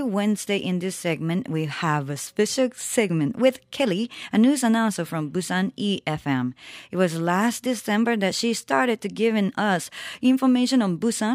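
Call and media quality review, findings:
No faults found on review of the speech recording; nothing to attribute to capture, network, or playback components.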